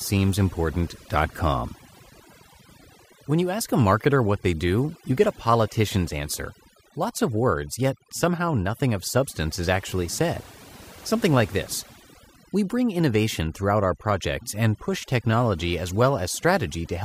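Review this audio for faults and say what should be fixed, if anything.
Throughout, the background drops to near-silent gaps speckled with twinkling artefacts: overdone noise removal, where aggressive reduction shuts off bands near the noise estimate and takes quiet speech detail with them. To prevent it, set the noise reduction more gently and check the result by ear before committing.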